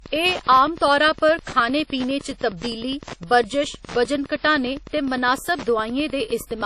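Wi-Fi interference, throughout: the audio circuit rectifies a nearby radio's beacon every 102.4 ms, giving ticking ten times a second, about 20 dB below the speech.

Low-bitrate audio saved at a high bitrate, also throughout: nothing remains above 14.4 kHz, likely a 32 kbit/s WMA source re-encoded as roughly 192 kbit/s MP3.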